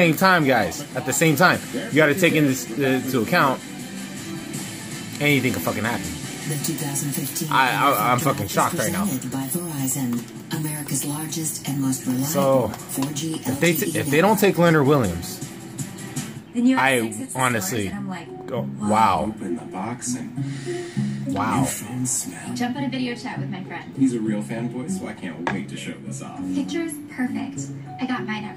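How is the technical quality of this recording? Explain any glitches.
No glitches are audible anywhere in the recording, and there is nothing to explain.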